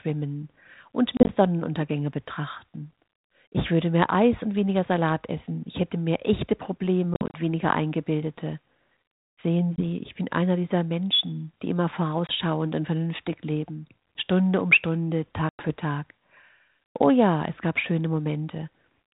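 Speech over what sounds like a 32 kbit/s G.726 line, with packet loss on an ADPCM call: hard silent gaps at 1.17 to 1.29, 7.14 to 7.36, 9.76 to 9.81, 12.27 to 12.32 and 15.49 to 15.71 s, each followed by briefly distorted speech while the decoder's predictor resyncs.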